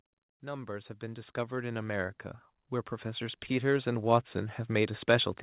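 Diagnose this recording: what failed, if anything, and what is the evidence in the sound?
Automatic gain rising in the call processing stage: from 0.4 to 2.25 s the level climbs by about 8 dB, and it climbs again from 3.01 s to the end. Voice and background noise swell together, which rules out a talker moving closer. Through narrowband audio capped at 4 kHz, consistent with G.711, the gain control judged the input too quiet and ramped up.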